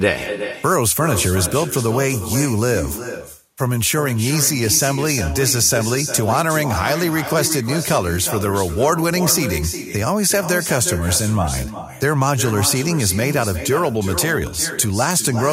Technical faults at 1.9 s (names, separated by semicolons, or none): echo with no canceller